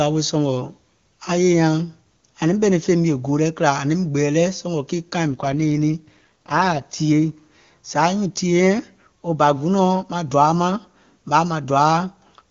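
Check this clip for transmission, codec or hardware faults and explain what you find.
One fault: an AMR rate drop from 5.28 to 6.82 s. The network throttles the wideband codec, consistent with a fall from 23.85 to 8.85 kbit/s, so speech turns rough and synthetic. Unlike a narrowband fallback, the full band and continuity remain, framed by clear HD Voice.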